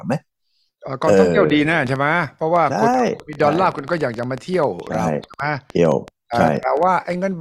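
A train of clicks runs from 1.50 to 7.14 s: irregular, similar pops at about 8.9 per second, about 5 dB above the speech, likely from external interference.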